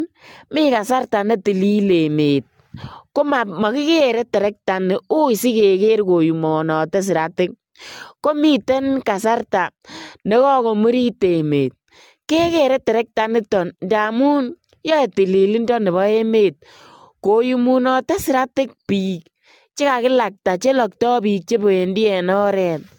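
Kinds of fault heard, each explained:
Generation loss: the speech sounds swirly, hollow and smeared, with blurred attacks and nothing above 17.1 kHz, more than a single encode at around 96 kbit/s would give. The cause is likely AAC-LC re-encoded around seven times, each pass adding fresh quantisation noise and spectral holes.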